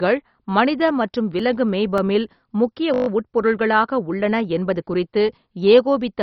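Throughout the clip the speech sounds dull, with nothing above 6 kHz, and carries a gurgling, granular roughness as upper bands flicker in and out. The likely cause is heavy MP2 compression at a very low bitrate, around 32 kbps. This differs from simple low-pass filtering because of the unstable, watery texture.

Between 0.81 and 2.27 s come six CD scratch ticks, spaced regularly and each lasting only a few milliseconds. A disc blemish defeats the error correction once per revolution, and the player patches over the damaged samples. Their steady spacing separates them from random vinyl crackle.

From 2.94 to 3.08 s a system hang loop repeats one 20 ms slice seven times, producing a brief 50 Hz buzz. The playback hardware kept cycling the same buffer while the system stalled. No audio is lost, and the repeat is exact, unlike a dropout or a decaying echo.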